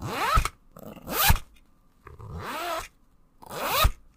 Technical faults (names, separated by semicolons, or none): damaged data in a compressed stream